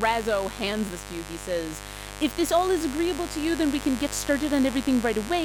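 From start to finish there's a mains buzz at 50 Hz, a raspy switching-spike hum riding fairly loud, not far below the speech.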